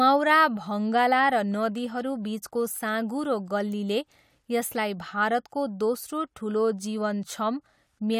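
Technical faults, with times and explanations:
No technical faults heard.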